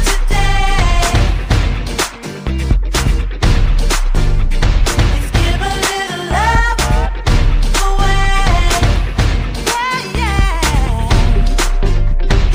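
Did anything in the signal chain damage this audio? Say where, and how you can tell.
Yes. Imaging from linear upsampling is present throughout, at sample-rate conversion. Straight-line interpolation left a faint mirrored band between 12 and 24 kHz, around 30 dB down, which fits 24 kHz source material.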